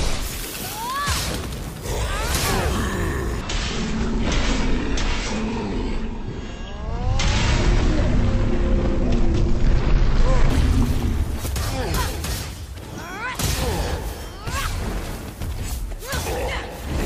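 From 3.41 s to 10.50 s a section at the wrong speed plays at 0.519 times its original rate, so the sound drops roughly ten semitones and drags noticeably. The likely cause is that this stretch was played or resampled against the wrong clock. What marks it as a speed error rather than a pitch-shift effect is that timing and pitch fall together: everything slows as it deepens, then both snap back together at 10.50 s.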